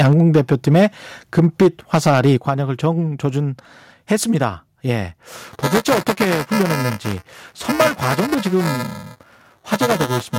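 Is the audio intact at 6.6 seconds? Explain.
No. At 6.6 seconds the speech carries a steady robotic buzz, around 375 Hz, caused by buffer tearing that runs from 5.32 s to the end of the clip. The writer and reader of the playback ring buffer have drifted so they cross inside every period, which fits a 128-sample buffer. A small slice of each buffer, around a sixth, is audio from roughly ten milliseconds earlier, with hard joins on both sides producing that rattle.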